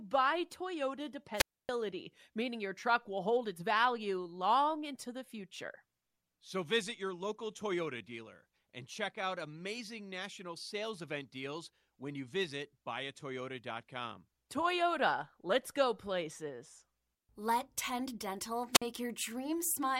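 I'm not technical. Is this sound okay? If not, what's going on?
No. This is a wireless microphone squelch dropout. The radio signal fades, hiss rises, then the receiver mutes the speech: at 1.35 s for about 0.28 s, and at 18.72 s for about 0.05 s.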